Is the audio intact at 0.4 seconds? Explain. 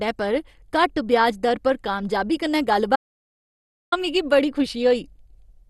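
No. At 0.4 seconds the speech is dull and gurgling, with nothing above 12.2 kHz. This fits likely MP2 compression at around 64 kbps, starving upper sub-bands throughout.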